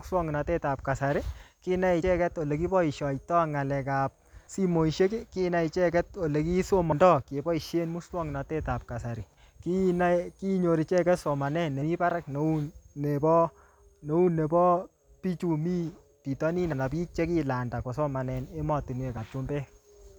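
The recorder likely handles the speech in 2.5-second chunks and loses roughly 50 ms at some handovers, leaving audio missing between chunks. The sound jumps abruptly forward at 2.02 s after "kasari kinai", 6.92 s after "kinai icheket ole", 11.82, 14.27 and 19.17 s.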